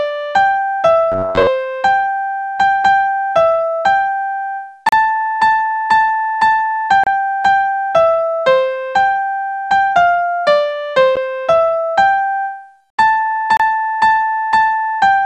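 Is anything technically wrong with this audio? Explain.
Yes. From 1.12 to 1.47 s the sound turns into a rigid metallic buzz near 94 Hz, the robotic sound from repeated short buffers. The cause is likely about 10.7 ms chunks replayed while about half the real audio is skipped. Unlike a dropout, nothing falls silent.

Gaps at joins of encoded pieces occur at 4.89 to 4.93 s (about 37 ms), 7.04 to 7.07 s (31 ms), 11.16 s (11 ms) and 13.57 to 13.60 s (28 ms). Separately encoded segments kept their start delay and end padding. Unlike packet loss, the sound resumes exactly where it stopped.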